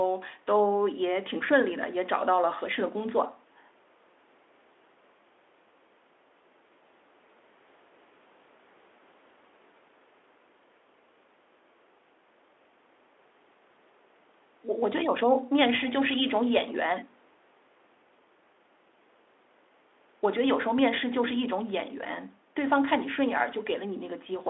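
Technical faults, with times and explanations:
No faults found; the call microphone processing takes out only the lowest bass, and the Speex coding, consistent with a rate near 18 kbps, sits within its normal range.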